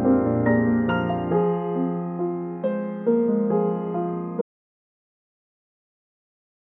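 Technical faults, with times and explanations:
4.42 s to the end: audio dropout to silence. The music is running and then just stops dead mid-flow, and the last 2.4 s or so are silent, with no room tone, no decay tail, nothing. That flatness is the giveaway: the input was most likely lost, through a disconnected device, a dropped link or an accidental mute, while the recorder kept writing silence. Whatever played after that point never made it in.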